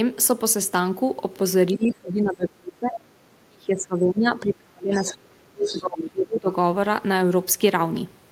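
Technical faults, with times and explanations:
1.73–2.99 s and 3.43–6.50 s, speech suppressed in double talk: the talker's speech dips deeply, by roughly 25 dB in the first stretch and around 30 dB in the second, for about a second and a half and then about three seconds. The likely cause is an echo canceller that could not separate near speech from loudspeaker echo while both sides spoke, so it pulled everything down. This is a loss of the wanted speech, not added sound.
4.92–5.16 s, 5.63–5.82 s and 6.00–6.10 s, other side's voice leaking through: brief scraps of a second voice appear inside the suppressed stretch. The first sits well below the talker at about 20 dB down, the third at about 10 dB down, and the second comes close to the talker's level at about 5 dB down. They are likely residual loudspeaker echo that the canceller failed to remove. Unlike the suppression, this adds a voice rather than removing one.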